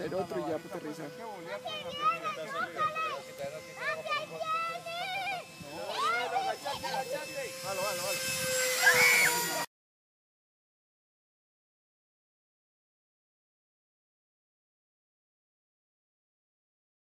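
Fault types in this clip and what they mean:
No audible faults present.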